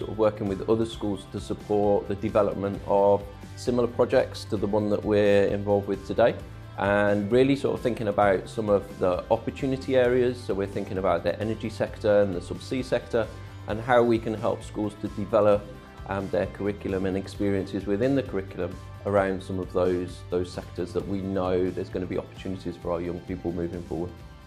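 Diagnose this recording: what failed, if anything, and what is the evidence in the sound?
Listening through the recording, nothing stood out as a failure at any stage of the chain.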